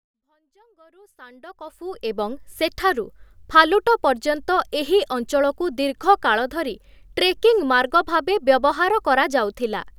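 Listening to this speech recording, which opens with a smooth fade-in from the very beginning up to about 2.25 s, nothing stood out.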